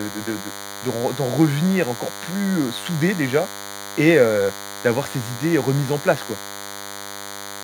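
A thin, steady buzz at 100 Hz, rich in harmonics, runs beneath the speech from start to finish, sitting roughly 15 dB below it. This is DECT cordless phone buzz: a nearby handset or base transmits a radio burst every 10 ms, which the audio circuitry rectifies into sound.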